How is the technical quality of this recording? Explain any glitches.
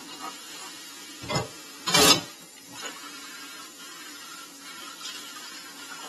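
Technical quality is poor across the whole recording. From start to finish the audio sounds dull and smeared, with a fizzy, warbling texture on sustained and hissy sounds, and nothing is heard above about 13.1 kHz. This likely comes from AAC compression. The AAC-LC encoder, working at a tight bit budget that fits roughly 32 kbps, coarsely quantised its frequency lines, cutting off the top band and leaving gaps that swirl audibly.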